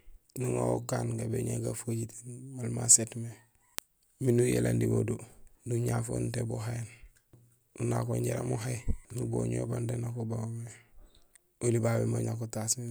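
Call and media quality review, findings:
Word clock ticks, 0.15–12.88 s. Sharp ticks of uneven strength through the speech, about every 0.7 s, roughly twenty in all. Probable component: a digital input (S/PDIF, AES or ADAT) on a receiver running its own clock, unlocked to the source. Mechanism: the two clocks drift apart by around 40 ppm. Each time they slip one sample period, a single sample is dropped or repeated, producing a tick.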